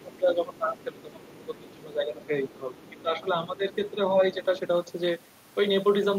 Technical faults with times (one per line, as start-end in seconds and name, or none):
0.00-3.63 speech suppressed in double talk
0.77-0.84 other side's voice leaking through
1.45-1.73 other side's voice leaking through
2.79-2.90 other side's voice leaking through
3.92-4.39 speech suppressed in double talk